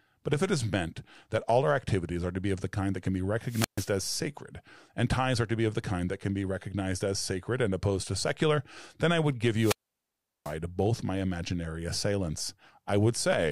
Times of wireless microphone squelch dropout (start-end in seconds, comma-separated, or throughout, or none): 3.46-3.92, 9.56-10.56